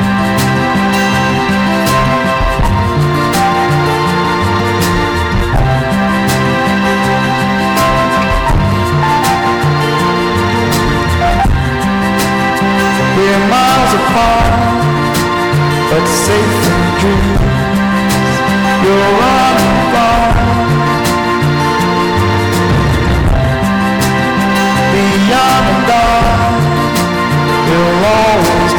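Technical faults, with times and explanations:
Throughout: hard clipping. Driven about 19 dB past full scale, nearly a third of samples flatten, giving harsh fuzz, square-topped waveform peaks and smeared high-frequency harmonics.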